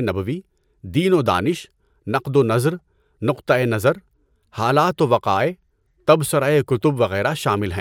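No technical faults can be heard anywhere in the speech recording; the signal stays steady and intact throughout.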